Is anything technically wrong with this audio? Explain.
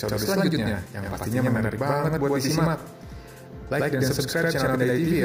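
Yes. A channel delay (doubling) runs through the whole clip. One channel arrives about 85.3 ms after the other, a gap that fits a 4096-sample buffer. The two channels are then summed to mono. At that spacing the ear does not blend the copies. The late one stands apart as a distinct repeat. Every onset is followed by a single slap echo at the same level, so the audio sounds doubled from start to finish.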